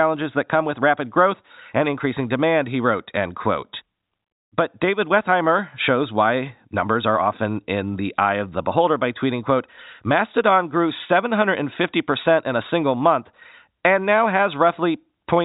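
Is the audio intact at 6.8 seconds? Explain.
Yes, the speech is intact at 6.8 seconds, with nothing disrupting it beyond the ordinary telephone-band sound of G.711 coding, which leaves nothing above 3.8 kHz.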